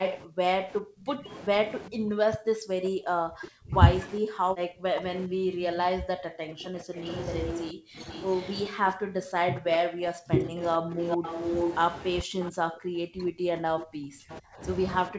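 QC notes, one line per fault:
0.0–11.27 s and 12.23 s to the end, speech suppressed in double talk: the voice repeatedly dips, by about 40 dB at worst and for around seven seconds in the first stretch, likely because the echo canceller attenuated the near talker while the far side spoke. The level drops only during overlap, unlike a steady gain fault or random packet dropouts.
0.05–0.14 s, 6.99–8.52 s, 10.59–12.5 s and 14.33–14.37 s, echo leak: a delayed copy of the voice returns 404, 429, 441 and 450 ms late, at about 5, 10, 0 and 25 dB below the speech. This is likely residual loudspeaker pickup that the echo canceller failed to remove. A distinct repeat this late is not room reverberation.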